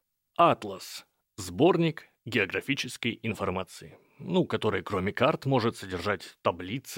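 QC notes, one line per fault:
No technical faults are audible; the speech signal stays continuous and stable across the whole recording.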